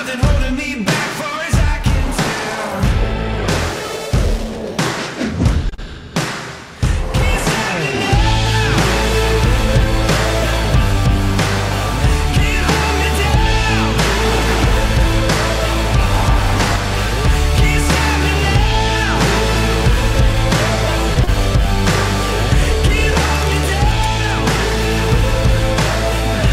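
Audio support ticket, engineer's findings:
Short stall from a late packet, 5.69 s and 5.74–5.93 s: sound held 28 ms, then 40 ms, nothing lost. Jitter buffer ran dry and the last sound was stretched; timing shifts rather than drops.

Scattered short gaps, 20.16–21.29 s: about three brief ticks or smears, roughly 50 ms patched in total, longest about 30 ms. Separate lost or late packets, not one stall.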